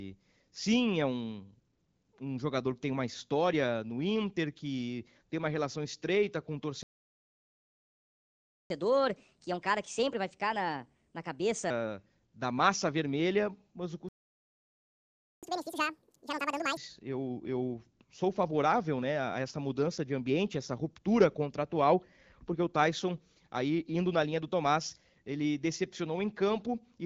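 A speech recording carried over what sounds like an AMR wideband (HD Voice) link, with its band edge near 7 kHz, contains two playback stalls. From 6.83 to 8.70 s the audio drops into silence for about 1.9 s, and from 14.09 to 15.43 s, after "massa vermelha mas o", it cuts out again for about 1.3 s. The likely cause is the player running dry of buffered data or its output thread being blocked. Each stall is followed by catch-up at higher speed, as the player resamples its backlog to recover lost time. After "relação estreita com o", from 8.70 to 11.70 s, playback runs at 1.25x with pitch raised around four semitones. From 15.43 to 16.77 s it runs at 2x, with pitch up roughly ten semitones.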